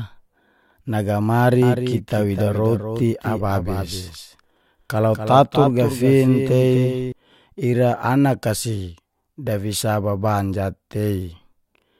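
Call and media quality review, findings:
Doubled audio track, 1.62 to 7.12 s. Speech repeats as a dry, full-band copy trailing by around 300 ms, roughly 10 dB down, with abrupt onset and cutoff. Likely a second, slower capture path or an out-of-step edit mixing in a duplicate.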